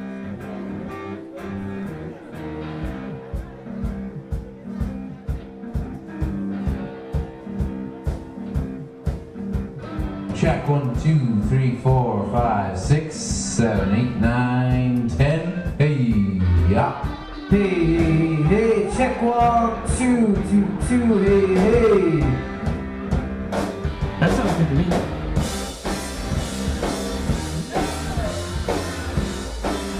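Nothing here stands out as a technical fault at any point in the recording.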